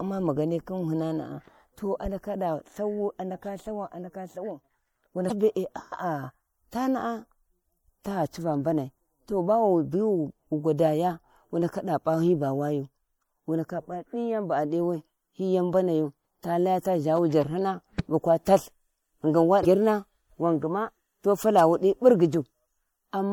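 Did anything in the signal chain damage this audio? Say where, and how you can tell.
Yes. The whole recording sounds watery and swirly, with dull, capped treble and metallic chirping on s sounds. That points to the codec stage, likely MP3 compression at a low bitrate around 64 kbps. With so few bits available, the encoder cut the high frequencies at a fixed point and discarded weak spectral detail. Those components then flicker in and out from frame to frame, which produces the swirl heard across the speech.

Two brief disruptions break into the speech, from 5.27 to 5.31 s and from 19.61 to 19.65 s, each about 40 ms long. These are damaged data in the compressed stream, introduced at the storage or transmission stage. Part of the file was wrong, so the decoder misread those frames and lost sync until it found the next valid frame header. That produced a short glitch instead of the intended sound.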